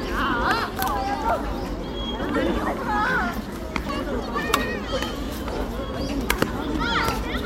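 At 2.31 to 2.36 s, damaged data in the compressed stream makes the decoder misread a frame and lose sync, producing a brief glitch about 44 ms long.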